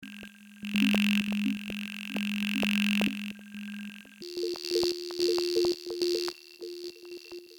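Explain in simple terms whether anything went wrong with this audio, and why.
A section at the wrong speed, likely from playback on the wrong clock: from 4.22 s to the end, the music runs 1.7 times too fast and almost an octave higher.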